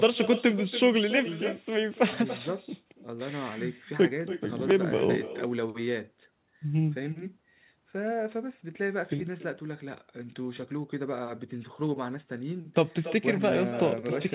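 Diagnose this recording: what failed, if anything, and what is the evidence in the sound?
The failure is in call processing: echo with no canceller. It runs through the whole clip. Every phrase of speech is followed by a fainter copy, roughly a third of a second later and about 13 dB quieter. The copy sounds thinner than the direct speech. The far end is playing the call through a loudspeaker. Its microphone picks that up and sends it back across the network, and no echo canceller removes it. The band stopping at 4 kHz fits a narrowband telephone codec.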